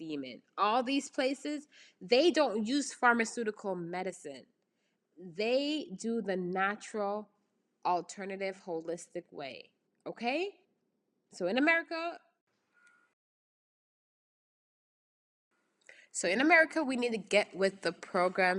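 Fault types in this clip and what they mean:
Rebuffering stall: The speech breaks off at 13.13 s and falls completely silent until 15.51 s, then picks up again at exactly the point it left, with "so in", so nothing is skipped and the clip simply runs about 2.38 s longer. The cause is playback outrunning the download: the player emptied its store of received audio, paused while waiting for more data, and resumed once enough had arrived.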